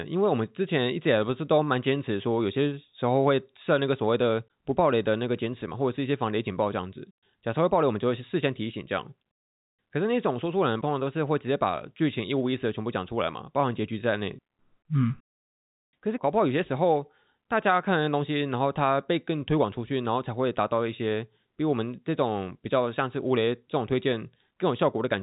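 Nothing's really wrong with this speech clip: it came over a WebRTC call path, and the lack of anything above 4 kHz fits G.711 mu-law at 64 kbps, which is just how that call codec normally sounds.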